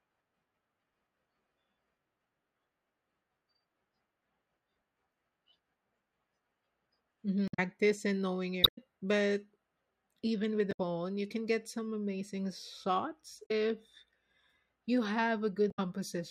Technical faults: damaged data in a compressed stream

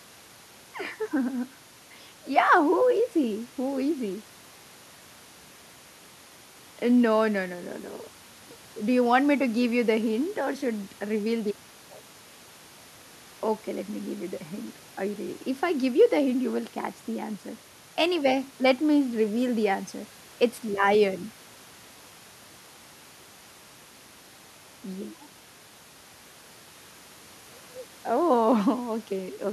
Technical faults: none

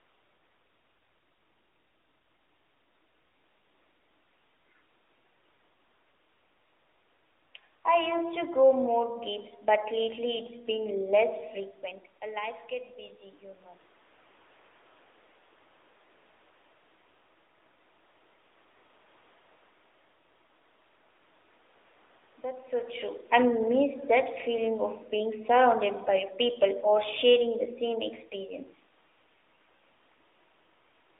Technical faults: AMR narrowband mobile codec

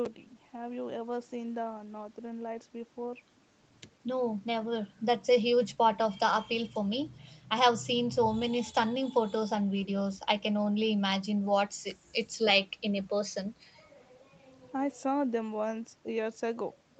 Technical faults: none

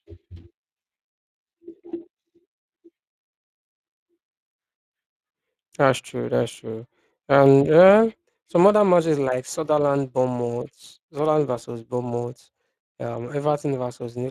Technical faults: Speex codec

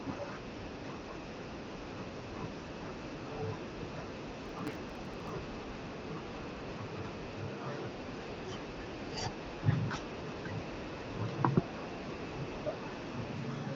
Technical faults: processor overload crackle

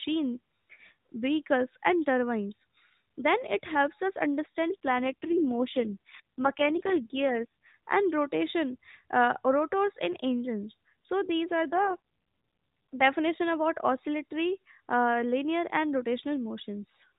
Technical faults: AMR rate drop

